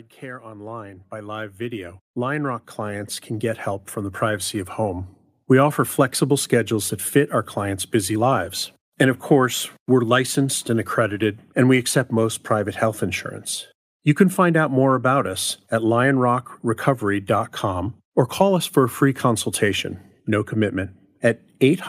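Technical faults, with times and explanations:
0.19 to 5.16 s, automatic gain rising: the level climbs steadily by about 17 dB over roughly five seconds, voice and room noise swelling together. That's the gain control deciding the input was too quiet and slowly cranking itself up.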